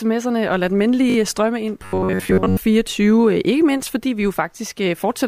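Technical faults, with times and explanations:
1.10–1.16 s, repeated buffer: A single 20 ms block of speech is played four times in a row, three repeats after the original, filling 60 ms with identical copies. Each restart of the block lands with a hard splice, so the passage comes across as a quick stutter. The device evidently ran dry and replayed its last buffer; the timeline then resumes where it left off, with essentially nothing skipped.
1.83–2.58 s, robotic sound from repeated short buffers: For about three quarters of a second the speech turns into a rigid, metallic drone at 93.8 Hz that still loosely tracks the syllables. That fixed pitch corresponds to a repeating segment roughly 10.7 ms long. The likely cause is audio arriving too infrequently, so the output kept looping a short buffer in place of the real signal, with most of this stretch, around 70 percent, made up of repeats rather than fresh audio.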